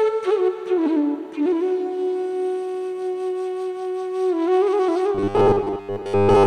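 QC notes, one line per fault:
5.15–6.46 s, robotic sound from repeated short buffers: a rigid metallic 100 Hz buzz, likely from a 10 ms chunk looping over most of the stretch.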